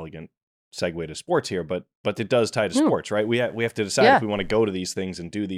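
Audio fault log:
3.22–4.72 s, mains buzz: right after "tie to hmm sports" a raspy 50 Hz buzz comes in under the speech, sitting about 40 dB down. Spiky switching interference, hitting twice per mains cycle, spreads harmonics up into the kilohertz range, hence the gritty edge rather than a clean hum.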